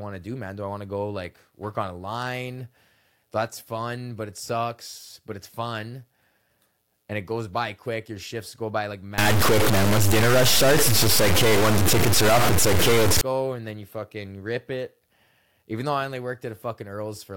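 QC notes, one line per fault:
9.18–13.21 s, stuck bit: right after "shifts go by like", the speech turns harsh and buzzy, and pauses fill with noise. This is likely one converter bit frozen, knocking about half the samples off by a fairly high step, roughly −15 dBFS.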